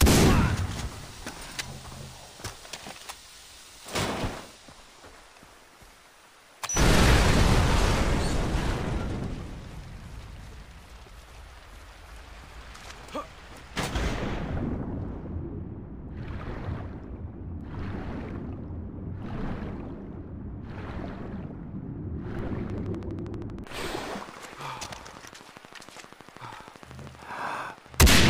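From 22.70 s to 28.28 s, a train of clicks, about 70 evenly spaced ticks at 12.6 per second, pops roughly 5 dB above the sound, likely from nearby equipment interference.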